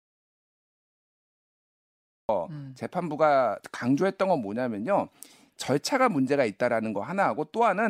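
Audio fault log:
0.00–2.29 s, audio dropout to silence: the clip opens in a dead gap that is already under way when it begins. For about 2.3 s there is silence, with no room tone or hiss underneath. The speech then cuts in abruptly mid-flow. This sounds like the input was likely lost, through a disconnected device, a failed link or a stray mute, while the recorder kept writing silence. Whatever was spoken in that stretch is gone.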